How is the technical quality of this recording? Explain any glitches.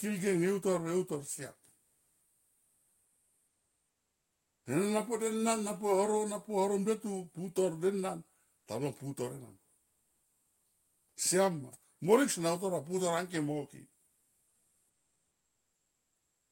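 The recording has one recurring glitch: comfort noise in place of the background. In the pauses at 1.81–4.65 s (ending just before "sene na"), 8.57–8.67 s, 9.83–11.17 s and 14.07 s to the end, the real background turns into a flat, featureless hiss, about 2 to 4 dB quieter. The likely cause is discontinuous transmission: the sender stopped transmitting during the pauses, and the receiver generated synthetic noise to fill them.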